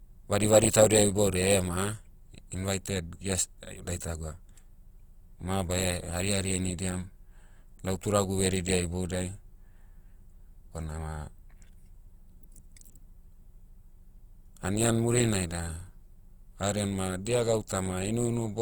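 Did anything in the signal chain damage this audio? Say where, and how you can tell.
Yes. Opus compression damage runs throughout, at the codec stage. The speech sounds grainy and rough, tones turned noisy rather than hollowed, yet the band still reaches 20.2 kHz. That fits Opus CELT mode near 24 kbps, likely filling starved bands with folded spectrum or noise.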